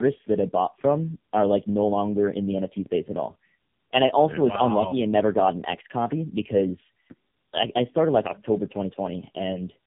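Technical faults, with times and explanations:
Throughout: tandem speech coding. The speech sounds rough, muffled and warbly, with nothing above 3.6 kHz. This narrow band fits an AMR-NB coder, here run at about 7 kbit/s. The degradation goes beyond what a single pass would cause. The call crossed two speech codecs in a row, bridged by a conventional telephone-band link. It was decoded and re-encoded at each border, so the second coder compressed output the first had already degraded, and their artefacts accumulated.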